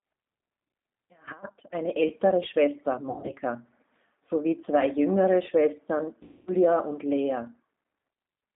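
All the way through, the speech has the rough, slightly synthetic edge of the G.729 codec, squeezed into a 150 Hz to 3.7 kHz band, which fits an 8 kbit/s G.729A stream.

From 3.10 to 3.37 s and again from 6.23 to 6.52 s, there's VoIP packet loss concealed by the codec. The first gap is patchy, about 160 ms missing across 240 ms. The second loses 240 ms. Each smears into a fading buzzy tone or coloured noise and stays weak for a moment afterwards.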